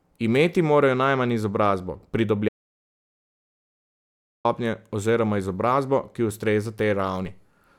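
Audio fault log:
2.49–4.45 s, audio dropout to silence: The speech stops dead right after "morajo najmanj izobrazbo" and picks up again at "oziroma izobrazbo", with nearly two seconds of silence in between. There's no room tone or hiss in the gap, so the recorder kept writing silence while the input was missing, most likely from a dropped device or link or an accidental mute. Whatever was said in that stretch is simply gone.
7.25 s, DC step: Near the end there's a single low thump while the speech carries on unchanged. The waveform's zero line jumps suddenly at that instant, the kind of shift you get when a converter recalibrates or an input carrying an offset gets switched in. The offset then eases back toward zero, as if through a very low high-pass around 2 Hz.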